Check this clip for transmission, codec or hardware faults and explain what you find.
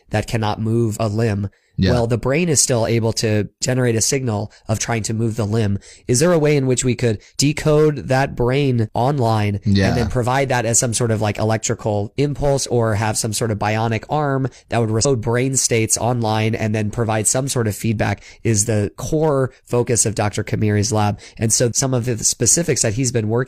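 One fault is present. At 15.00 to 15.06 s, just after "bionic arm that would", a stream segment was likely skipped: a piece of the segmented stream failed to load and the player moved straight on. The audio jumps ahead with a blip, resuming at "brain states online and".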